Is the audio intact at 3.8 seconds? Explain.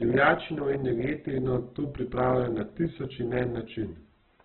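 No. At 3.8 seconds the speech is damaged, as it is for the whole clip. The fault is likely Opus compression at a very low rate. The grainy texture points to something near 8 kbps. With so few bits, the encoder keeps each band's overall energy but fills the detail by folding in lower bands or noise. Nothing is left above about 4.2 kHz. The speech sounds narrow, rough and heavily grainy, with tones turned noisy.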